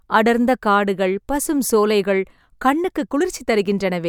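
No technical faults can be heard anywhere in the recording; the signal runs continuously at a steady level with no break in the audio.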